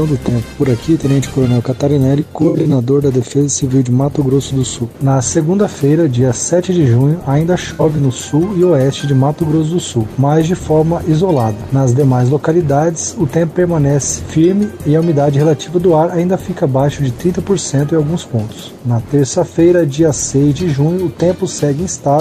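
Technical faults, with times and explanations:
2.20–2.73 s and 7.73–7.99 s: AAC frame loss with concealment. Short losses, none longer than about 70 ms, are scattered through both spans. The decoder rebuilds each gap from the last good spectrum, so the sound smears, turns noisy or phasey, and doesn't drop out.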